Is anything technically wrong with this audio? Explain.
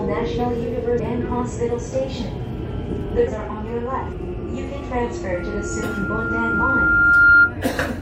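Yes, there are two faults.

Compressed frames skipped at 0.98 s, 3.26 s and 4.12 s: whole 21.3 ms frames go missing or are rejected by the decoder, so the sound jumps ahead by roughly half a second, then about 0.3 s and 0.4 s. Overlapping frames smear each join into a brief blip rather than a click. Unlike a dropout, there is no silent gap; the sound simply leaps forward.

Loudspeaker feedback squeal from 5.34 s to 7.54 s: a microphone is picking up its own loudspeaker, and at 1.4 kHz the loop gain exceeds one. The tone swells over about two seconds to roughly 15 dB above the surrounding sound. Unlike a steady interfering tone, it grows on its own.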